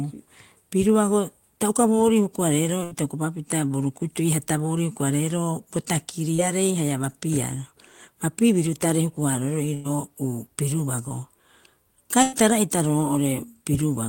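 At 2.83 to 2.93 s a burst of packet loss drops about 80 ms of speech. The receiver stretches the last sound for roughly 76 ms, fading it into a held buzz or hiss, then jumps ahead with that stretch gone. At 6.35 s a short concealed packet loss removes about 40 ms. Around 31 ms of synthesized continuation covers the hole and blends back into the real audio, leaving a brief smear. The same burst of packet loss recurs at 9.74 to 9.87 s and 12.22 to 12.34 s, each losing about 100 ms under a fading, roughly 100 ms fill.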